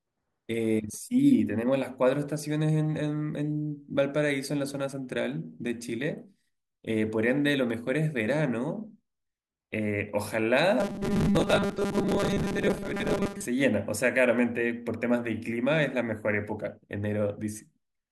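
Speech, and from about 10.80 to 13.46 s it goes robotic: the voice flattens into a stiff metallic buzz pitched at around 200 Hz, still loosely tracking the words. That's the classic robotic sound from repeated short buffers. Most of that stretch seems to be replayed material rather than fresh audio, and a 200 Hz buzz fits a chunk of roughly 5 ms looping over and over, likely because new audio wasn't arriving fast enough to fill the gap.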